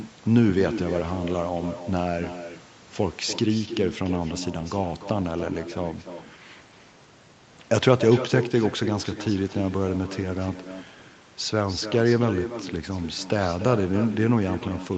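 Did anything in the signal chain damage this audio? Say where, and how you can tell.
Yes. The damage sits in the call path: an echo with no canceller runs right through the speech, a thinner copy trailing every phrase by roughly a third of a second at about 12 dB down. The far end's loudspeaker fed its microphone and nothing subtracted it before sending it back.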